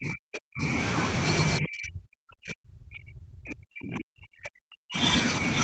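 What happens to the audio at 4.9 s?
At 4.9 s you're near the end of a stretch from 1.59 to 5.01 s where the speech keeps dipping and dropping out in chunks, by up to about 40 dB. That's likely speech suppressed in double talk: the echo canceller couldn't separate the talker from loudspeaker echo, so it turned both down.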